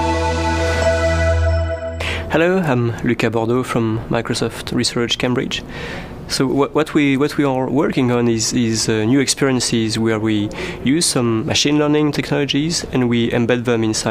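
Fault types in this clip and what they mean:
Nothing to flag here; I listened all the way and heard no faults at all.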